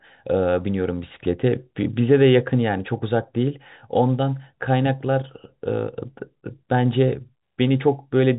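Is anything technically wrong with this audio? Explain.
No, nothing is technically wrong: this speech carries the narrow, telephone-like band of G.711 coding, with nothing above about 3.8 kHz, as expected from a standard 64 kbps phone line.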